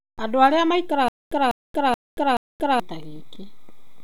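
From 1.08 to 2.80 s, stutter with silent gaps: a 197 ms fragment repeats four times, likely from a stalled stream, drawing identical waveform blocks separated by flat, empty stretches.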